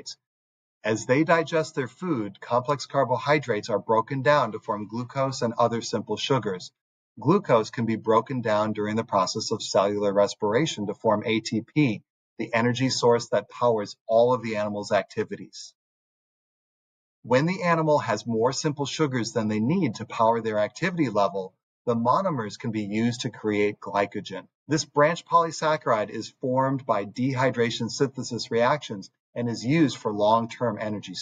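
No technical faults can be heard anywhere in this recording.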